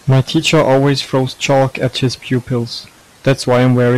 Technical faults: hard clipping

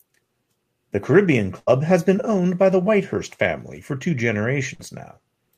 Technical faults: burst of packet loss; short concealed packet loss

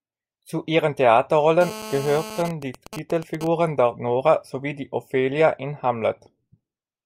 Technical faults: GSM phone buzz; GSM signalling bursts

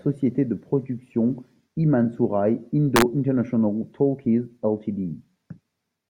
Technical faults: integer overflow

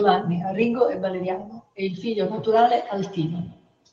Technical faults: feedback echo between two devices

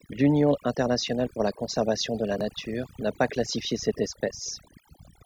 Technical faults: overdone noise removal

